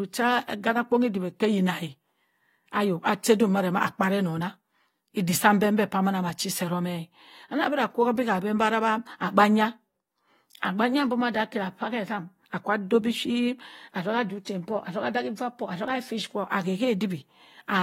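At 14.45 s there is pre-echo. A sharp attack in the speech is preceded by a short burst of hiss about 15 ms long. The codec coded this stretch as one transform block. Its quantisation noise was sized for the loud attack and spread across the whole block. That noise also filled the quiet moment before the onset, where nothing masks it. The attack itself sounds softened and smeared.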